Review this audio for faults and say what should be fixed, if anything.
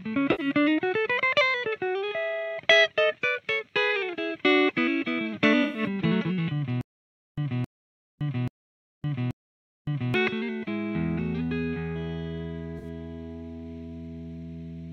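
Bit errors in AAC frames were caught by the decoder, which concealed them itself, causing a corrupt frame concealed fault at 0.31 to 0.46 s, 5.63 to 5.83 s and 12.78 to 12.86 s. Each spans a few frames. Protecting the transport with error correction or checksummed retransmission would stop damaged frames reaching the decoder.

The player or stream likely stalled from 6.81 to 10.14 s, and each retry replayed the last fragment before running empty, producing a stutter with silent gaps. A 269 ms burst repeats four times, one every 832 ms, separated by 563 ms of digital silence, and the audio meant for that stretch is lost. A larger playback buffer, with retries that resume from the correct position instead of replaying old data, would prevent this.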